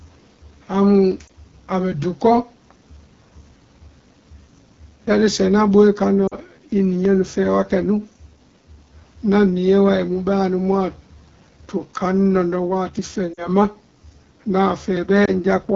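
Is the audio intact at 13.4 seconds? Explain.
No. From 13.33 to 13.49 s there are lost AMR speech frames. The decoder repeats its last good pitch and vocal-tract settings at falling gain, so the speech dips briefly toward near silence, which fits about 40 ms of missing frames, then returns weak or rough for a moment.

Throughout, including this moment, the AMR wideband (HD Voice) codec runs at 8.85 kbit/s, one of its two lowest rates. The speech is modelled only up to 6.4 kHz, with shaped noise filling the band above, giving a plainly audible rough, raspy texture.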